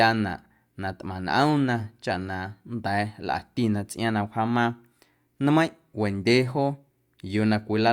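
Nothing stood out as a technical fault on listening to this speech recording.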